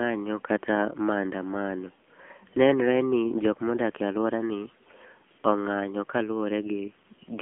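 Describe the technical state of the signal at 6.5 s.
At 6.5 s the speech carries AMR narrowband mobile codec damage, as it does throughout the clip. Its frame-by-frame vocal-tract model and sparse pulses give a plainly buzzy, synthetic tone that points to a low mode near 8 kbps. A spectrogram shows an empty band above 3.5 kHz and little energy below 150 Hz.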